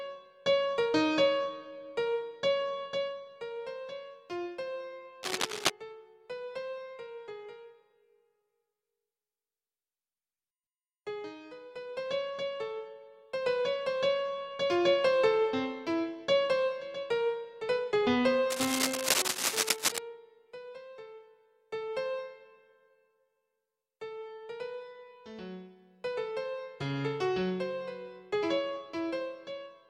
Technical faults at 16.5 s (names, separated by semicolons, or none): none